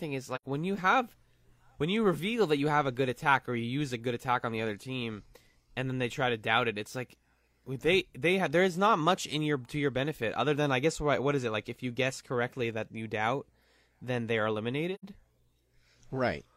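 At 0.35 s and again at 14.94 s, AAC frame loss with muting leaves soft-faded gaps of about 85 ms, which fits two lost frames. The decoder zeroed them.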